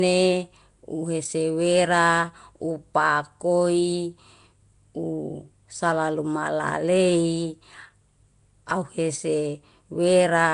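A speech clip with a rough, hissy halo and a smeared, underwater feel throughout. That's likely Nellymoser compression, with nothing above 10.6 kHz and a sound consistent with a 44 kbps Flash-era stream.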